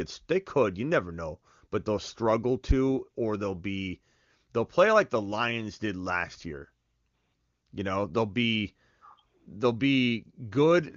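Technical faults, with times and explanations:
Nothing stood out on listening; the AMR wideband (HD Voice) coding at what sounds like its top rate of about 24 kbit/s comes across as clear speech.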